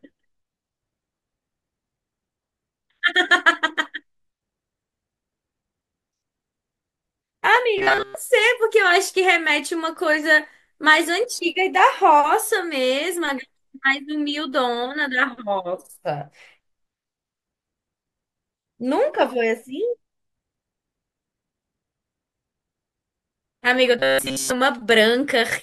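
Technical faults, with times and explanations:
7.78–8.15 s and 23.99–24.52 s, robotic sound from repeated short buffers: the speech collapses into a rigid, metallic buzz at 134 Hz, most of the first span and all of the second. Likely cause: a block of roughly 7.5 ms replayed because fresh audio arrived late. Unlike a dropout or stutter, nothing falls silent; the constant pitch is what gives it away.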